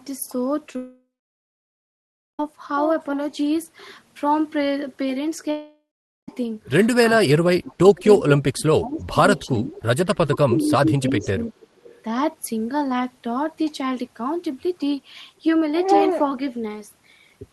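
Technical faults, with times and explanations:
0.67 and 0.73 to 0.75 s, short concealed packet loss: Two tiny gaps, each about 10 ms of missing audio, sit a few hundredths of a second apart. The receiver covered each hole by stretching the sound just before it, then blended back into the real signal. The patches are brief, so they come across as a brief smear or wobble rather than a break.
0.76 to 2.40 s, long network dropout: About 1.63 s of audio is missing, likely because nothing arrived over the network. The receiver first carried the last sound forward as a fading buzz or hiss. For roughly 1.32 s of the gap only silence remains. The sound then resumes further on, with the lost stretch gone.
5.51 to 6.29 s, long network dropout: About 0.77 s is lost here, again likely a network gap. The concealment extends the last sound briefly and lets it die away. Silence fills about 0.45 s. The audio then picks up later, skipping what went missing.
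7.16 to 9.18 s and 9.49 to 11.57 s, speech suppressed in double talk: In both spans the speech dips and breaks up in pieces, totalling roughly 1.5 s in each. The deepest cut is about 35 dB in the first span and about 20 dB in the second. Both sides were talking at once. The echo canceller likely could not tell the local talker from loudspeaker echo, so it pulled everything down.
7.96 to 8.01 s, 9.36 to 9.46 s, 11.21 to 11.27 s, 11.60 to 11.67 s and 11.83 to 12.02 s, echo leak: Faint scraps of speech return 360 ms after the original. They sit about 25 to 35 dB below the main signal. A loudspeaker on one end fed its microphone, and the echo canceller likely missed part of that pickup. The leftover was sent back as short, delayed copies.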